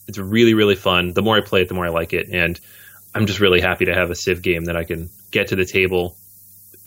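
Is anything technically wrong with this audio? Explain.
Yes. From start to finish the speech carries low bit depth with noise shaping. The sound points to roughly 8 bits, and the rounding error that comes from so few steps has been fed back and pushed up toward the high frequencies instead of being left flat. What you hear is a steady, thin hiss that gets much brighter toward the top of the band, fairly loud against the voice at roughly 20 dB down.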